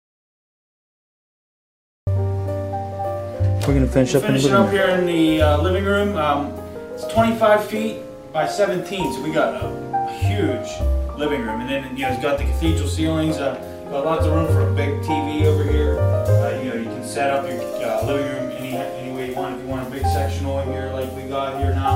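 Audio dropout to silence runs from the very start to 2.07 s: the clip opens already in a gap of silence, with no room tone or background at all, and the sound then comes in abruptly mid-flow rather than starting naturally. Whatever was happening before 2.07 s is simply missing. The likely cause is that the input signal was lost for that stretch while the recorder kept writing silence.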